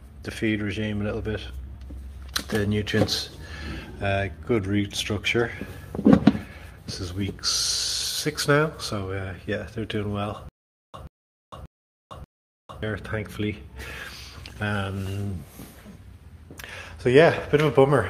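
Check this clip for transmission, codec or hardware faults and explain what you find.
Playback likely stalled between 10.49 and 12.83 s, each retry replaying the last fragment before running dry: a stutter with silent gaps. A 133 ms burst repeats four times, every 585 ms, with 452 ms of digital silence between, and the audio due there is lost.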